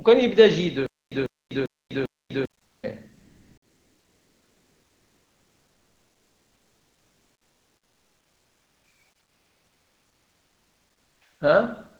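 From 0.86 to 2.45 s there is a stutter with silent gaps. A 148 ms fragment repeats four times, each followed by about 249 ms of digital silence, a 397 ms cycle. The player likely stalled and replayed its last buffer on each retry. The missing audio never arrives.

Comfort noise then replaces the background at 2.65 to 2.83 s, 3.17 to 8.83 s and 9.23 to 11.21 s. The background sits about 50 dB below the loud parts. It becomes a flat, featureless hiss, about 2 to 3 dB off in level, then level. This is likely discontinuous transmission, which fits Opus DTX.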